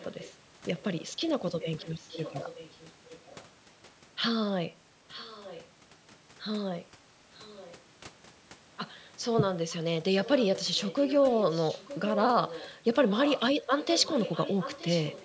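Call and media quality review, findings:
Echo leak: faint delayed repeat of the speech at 0.0–0.33 s, 1.6–3.45 s, 5.09–5.67 s, 7.34–7.74 s and 10.23 s to the end. Lags about 914 ms, roughly 20 dB under the speech, louder near the end. Likely the far end's echo canceller letting loudspeaker pickup through.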